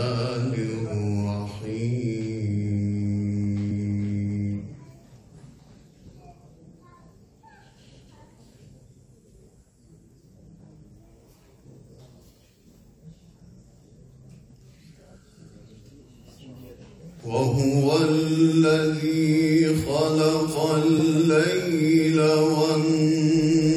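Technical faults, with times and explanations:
3.70 s and 20.98 s, compressed frames skipped: the decoder drops whole frames, about 50 ms and 20 ms of sound, consistent with losing roughly two frames and then one frame of about 23 ms each. The audio jumps ahead at each join by the length of the missing frames.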